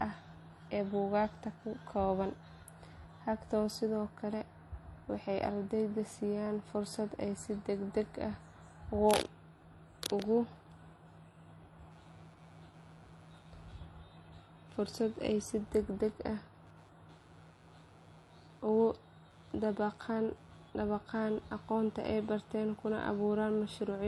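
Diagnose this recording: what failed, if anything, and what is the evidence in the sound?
Two separate problems here. The whole clip has a smeared, swirly treble with a low top end and two layers of artefacts stacked on each other, which is most likely transcoding between lossy codecs, something like an MP3 pass re-encoded at a low HE-AAC rate. That's a codec-stage fault: the second encoder wastes bits on the first one's junk.

From 11.92 s to the end there's computer activity noise, a buzzy, chirpy pulsing at roughly 150 Hz, sitting about 35 dB under the speech. It tracks machine load, not the talking, so it's an analogue wiring problem: processor or graphics current modulating a shared ground into the audio input.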